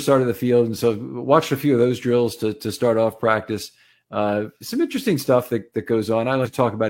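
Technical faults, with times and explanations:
6.41–6.48 s, compressed frames skipped: right after "interesting stuff that that", about two whole frames go missing, which fits 46.4 ms codec frames, so roughly a tenth of a second of speech vanishes. The audio jumps ahead by the length of the missing frames.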